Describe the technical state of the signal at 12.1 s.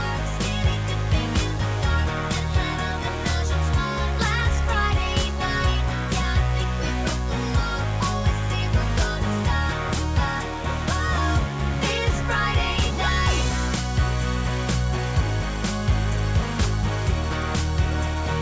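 At 12.1 s the signal is intact, with no audible fault at that point.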